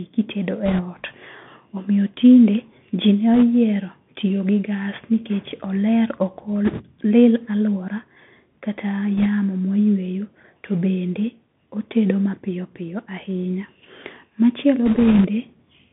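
The whole speech clip carries the Bluetooth CVSD headset codec. The band runs from 150 Hz to 3.5 kHz, consistent with a 64 kbps one-bit delta coder whose adaptive step lags fast high-frequency movement. This leaves scratchy sibilants, granular hiss and plainly audible overload roughness.

Bit errors on a Bluetooth voice link then add bursts of rushing crackle without sharp clicks, because each flipped bit moves the waveform only one step, sized by the current speech level. The bursts fall at 0.66–0.82 s (heaviest, around 5 percent), 3.34–3.44 s after "tinde ji", 6.65–6.82 s after "gas nikech oler ok", 9.18–9.27 s, and 14.86–15.28 s.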